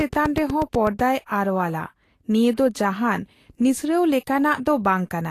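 From 0.01 s to 1.00 s, a train of clicks ticks over the speech at a steady 8.1 per second, about ten similar pulses peaking a little above the speech, ending just before "ᱟᱨᱣᱟᱞᱟ ᱱᱤᱭᱟᱹ ᱫᱚ ᱡᱟᱦᱟᱸᱱ". The even spacing and matching shape set it apart from random crackle, likely interference from nearby equipment.

Throughout, plainly audible Vorbis compression leaves the treble hissy and grainy, with roughened tones and smeared consonant attacks, which fits a low bitrate around 36 kbps. Nothing is heard above 14.2 kHz. Unlike a simple low-pass filter, the band below that cut-off is itself coarse and noisy, not clean.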